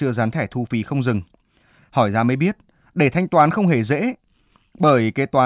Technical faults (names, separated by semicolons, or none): none